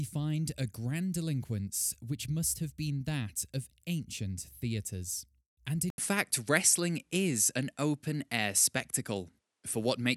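Speech recording in which, at 5.90 s, an 80 ms gap is followed by duller audio with nothing above 11.8 kHz, a level shift of a few dB and a faint new noise floor until the end, likely the input switched to a poorer device.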